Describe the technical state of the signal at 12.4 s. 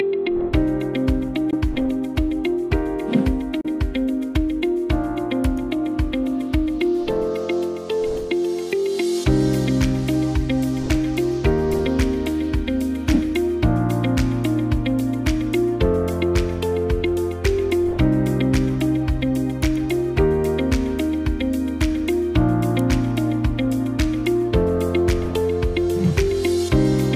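At 12.4 s the signal is intact, with no dropout, distortion, noise burst or other fault audible at that point.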